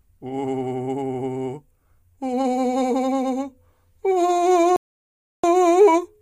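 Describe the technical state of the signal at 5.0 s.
At 5.0 s the music has simply stopped. It's sitting in the middle of a rebuffering stall that runs from 4.76 to 5.44 s. The player used up everything it had downloaded and went quiet while waiting for more data, so you get a clean drop to silence for about 0.67 s. Then the music picks up exactly where it left off. Nothing's skipped; the gap just adds that time to the playback.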